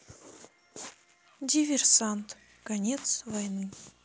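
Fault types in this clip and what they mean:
Video or display buzz: A screen or video cable is leaking into the audio, giving a 60 Hz buzz at the picture's field rate with a grainy hash riding on top. It comes in at 1.73 s and runs to the end, sitting quietly, roughly 40 dB under the speech.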